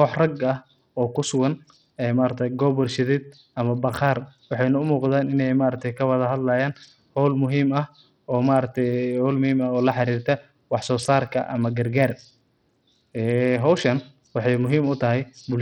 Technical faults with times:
0.00-15.61 Bluetooth SBC compression

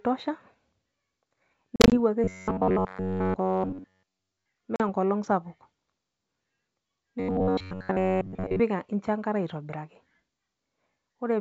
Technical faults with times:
1.76-1.96 packet loss on an ADPCM call
2.24-4.46 robotic sound from repeated short buffers
4.76-4.82 packet loss on an ADPCM call
7.20-8.61 robotic sound from repeated short buffers

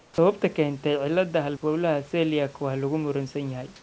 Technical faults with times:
0.00-0.18 comfort noise in place of the background

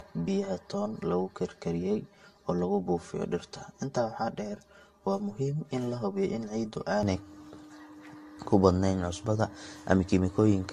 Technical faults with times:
0.00-10.72 generation loss
0.00-7.03 channel delay (comb filtering)

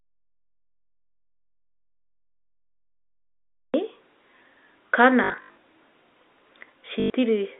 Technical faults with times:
0.00-3.74 audio dropout to silence
5.24-5.56 packet loss with last packet repeated
7.00-7.10 packet loss with last packet repeated

